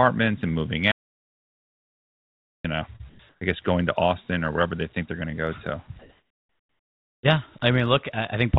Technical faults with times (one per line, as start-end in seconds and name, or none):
0.92-2.64 audio dropout to silence
2.96-3.01 short concealed packet loss
3.09-3.41 comfort noise in place of the background
5.99-7.23 comfort noise in place of the background